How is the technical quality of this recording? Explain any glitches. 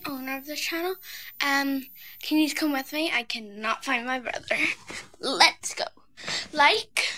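The recording carries a switching supply whistle from 0.0 to 2.99 s: a thin, high tone between 13.9 and 14.0 kHz, roughly 20 dB below the sound. A power supply's regulator cycling at an audible rate leaks into the signal. Unlike a fixed-pitch line-scan whistle, its pitch wanders slightly.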